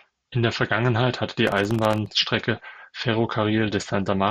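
From 1.47 to 2.08 s, just after "hatte die", the speech carries processor overload crackle. The processor repeatedly missed its deadlines for very short buffers, each under a millisecond, leaving brief silent gaps with hard edges. It sounds like gritty tearing, shows as tiny near-silent notches in the waveform, and appears as dense vertical broadband streaks on a spectrogram.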